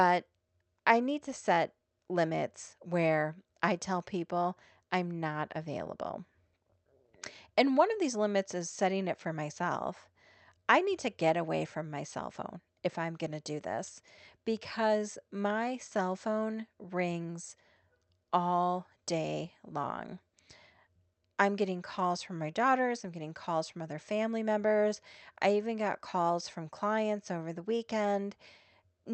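Clock drift between sender and receiver runs through the whole clip. The sender's clock runs slow, by roughly one and a half percent. The receiver's jitter buffer keeps draining. It has to fill the gap with extra audio. Small timing hiccups result, at uneven intervals.

Repeated timing corrections follow from this, from 0.02 s to 28.96 s. The receiver keeps repeating short pieces to stay in step. The speech plays at 98% speed. About half a second is added in total. It all comes over an 8 kHz Opus call bandwidth.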